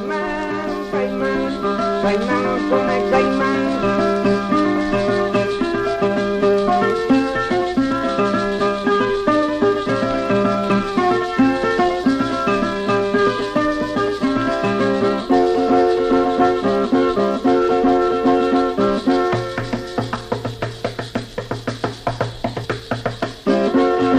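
The audio jumps forward four times, at 9.41 s, 15.0 s, 20.31 s and 22.64–22.66 s. These are compressed frames skipped: between one and four frames went missing or were rejected as damaged, dropping a few tens of milliseconds each time.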